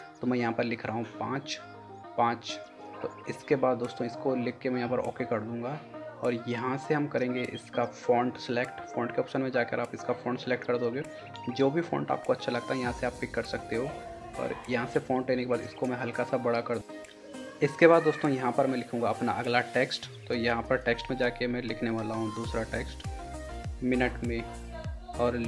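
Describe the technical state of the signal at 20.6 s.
At 20.6 s the signal is intact, with no dropout, clipping, glitch or other technical fault.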